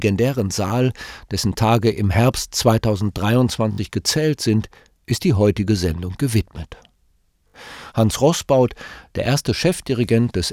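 At 0.68 to 0.70 s the speech catches on a repeated buffer: a short slice, which fits a 20 ms buffer, plays twice with a hard join, heard as a brief tick. At 3.72 to 3.78 s, just before "gezählt sind ist die", and again at 7.48 to 7.54 s, the slice loops four times, giving a short buzzy stutter. New audio arrived late, so the device replayed old samples. Unlike a dropout, there is no silence, only identical repeats.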